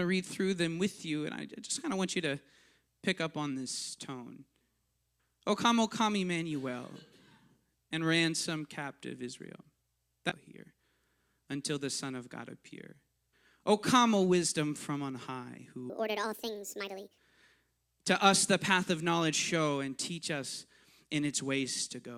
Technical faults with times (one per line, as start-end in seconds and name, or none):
10.29-10.34 stream segment skipped
15.90-17.18 section at the wrong speed